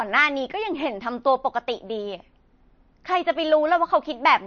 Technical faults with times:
0.00-4.46 MP3 compression

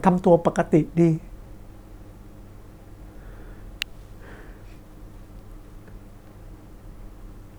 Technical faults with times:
3.82 electrical switching spike

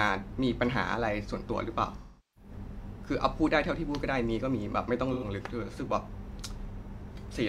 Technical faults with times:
1.97-2.51 AAC frame loss with concealment
5.13-5.24 AAC frame loss with concealment

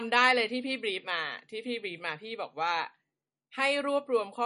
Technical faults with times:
0.00-4.46 MP3 compression

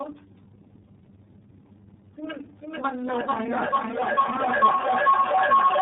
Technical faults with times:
0.00-5.81 tandem speech coding
2.44-5.81 feedback howl

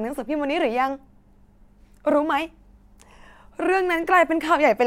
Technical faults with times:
none

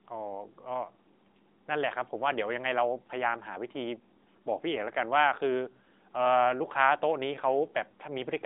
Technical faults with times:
none

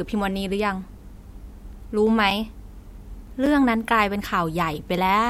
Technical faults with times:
2.30 block of digital silence
3.46 block of digital silence

